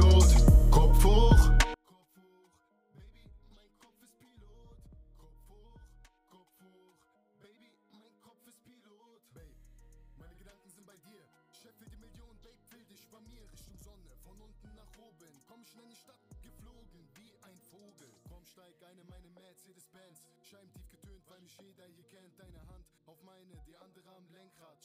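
From 1.74 s to the end, summing to mono drops the audio by about 37 dB to a faint residue, the sign of one channel inverted, likely a polarity flip. The mono spectrogram nearly empties.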